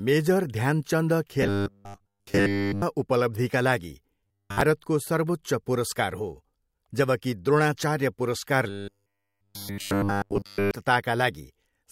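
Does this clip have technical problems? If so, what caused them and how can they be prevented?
Yes. Audio likely arrived too seldom, so short 10 ms buffers were replayed in place of skipped material, most of it from 1.42 to 2.82 s and 4.20 to 4.61 s, and all of it from 8.70 to 10.71 s. This robotic sound from repeated short buffers forces a rigid 100 Hz metallic buzz onto the speech. Larger or adaptive buffering with reliable scheduling of the audio thread prevents it.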